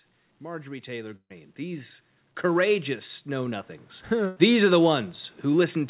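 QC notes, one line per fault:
0.26 to 4.5 s, automatic gain rising: the gain control decided the input was too quiet and kept turning it up, about 14 dB in all, so the talker and the room noise swell together. It settles just before "are the".
1.16 s and 4.28 s, burst of packet loss: two gaps where audio never made it through. The receiver stretched out the last sound and faded it down, into about 70 ms of silence the first time. About 140 ms and 80 ms of audio go missing.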